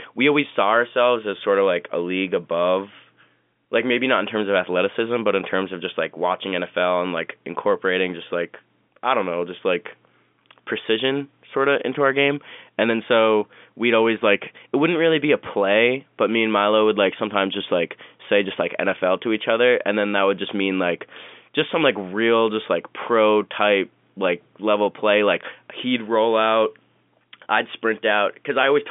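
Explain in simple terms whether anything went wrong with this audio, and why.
No faults can be heard.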